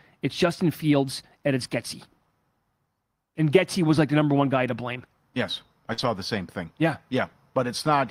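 A speech recording with two closely spaced network faults around the 6-second mark. The first, at 5.93 to 6.00 s, is short concealed packet loss: about 40 ms of audio never arrived, and the decoder bridged roughly 43 ms by extending the preceding sound before blending back into real signal. It is heard as a brief smear or wobble, and its mark is that invented continuation. Overlapping it, from 5.98 to 6.08 s, is a lost packet rebuilt from error correction. Here the gap is filled with real but degraded content, about 60 ms decoded from low-bitrate backup copies carried in following packets, which fits three lost packets. Instead of a smear, this stretch sounds rougher and noisier.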